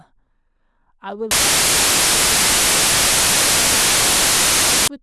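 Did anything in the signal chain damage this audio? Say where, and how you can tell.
Yes. From 1.31 s to 4.88 s the speech turns into loud white noise. That's samples built from the wrong bytes at the sample-format conversion stage: misassembled bytes push the fast-changing low bits into the top of each value.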